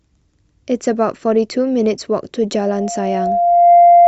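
At 2.54 s loudspeaker feedback squeal sets in and runs to the end of the speech. The microphone is re-capturing its own loudspeaker, and at 695 Hz the loop gain has passed unity, so that one frequency feeds on itself, swelling over roughly a second to sit around 10 dB above the speech. On a spectrogram it is a single bright horizontal line at 695 Hz thickening as it grows, and the waveform envelope balloons steadily.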